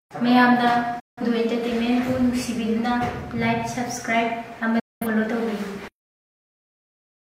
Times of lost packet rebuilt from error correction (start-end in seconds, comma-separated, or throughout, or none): none